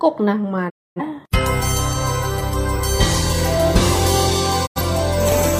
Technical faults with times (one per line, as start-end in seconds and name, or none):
0.68-1.01 digital broadcast dropout
4.65-4.81 digital broadcast dropout